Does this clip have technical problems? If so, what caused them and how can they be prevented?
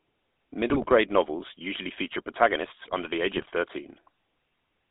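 Yes. Throughout, the GSM full-rate codec rebuilds speech from a vocal-tract model driven by sparse pulses at a bitrate consistent with about 13 kbps. This leaves a buzzy, gravelly roughness in a band of roughly 250 Hz to 3.6 kHz. A wider-band codec such as AMR-WB, or a higher bitrate, would avoid this.

GSM bit errors appear from 0.70 to 0.89 s, just before "novels usually feature protagonists", and from 3.36 to 3.46 s, just after "protagonists under the age". Corrupted filter, pitch and gain values reach the decoder and produce squawks, pops and gargling. Better signal strength or stronger error protection on the link would prevent them.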